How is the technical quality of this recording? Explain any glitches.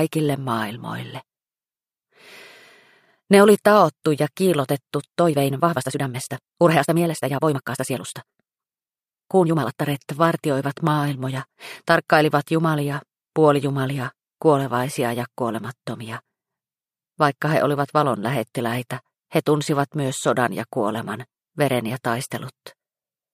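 The recording has one glitch: a time-stretched section from 5.20 to 9.84 s. The audio there plays about 1.57 times faster at unchanged pitch, so it sounds rushed. The likely cause is software compressing the passage to fit a length by dropping short slices of the waveform.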